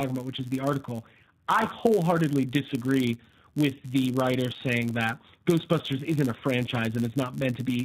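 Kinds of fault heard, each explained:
G.729 codec: An 8 kbit/s codec rebuilds the speech from a vocal tract model and pulses. Nothing above 4 kHz passes. It sounds plainly rough and synthetic.
Block size mismatch (padded): Each block is topped up with zeros. The gaps buzz at 99.6 Hz, and the speech runs slightly slow, at 0.996 speed.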